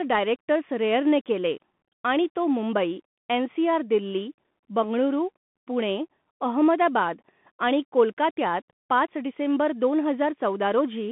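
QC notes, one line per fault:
throughout, Bluetooth CVSD headset codec: speech is confined to 150 Hz to 3.5 kHz, with scratchy s sounds, distortion on loud bright passages and a granular hiss underneath. A one-bit up/down coder with an adapting step cannot follow fast rises, which fits a 64 kbps CVSD link.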